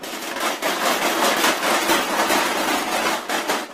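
From 0.32 to 0.40 s there is a brief jumbled stutter. This is chunks out of order: a 40 ms chunk played one slot late, after the chunk that should follow it. Nothing is missing, but the swapped order leaves three hard joins.

From 1.76 to 3.19 s the sound turns rough and watery, and the top end dulls. This is a call bitrate drop: the encoder was pushed from about 48 kbps down to about 14 kbps, bottoming out for roughly 1.4 s, coding coarsely and trimming high frequencies.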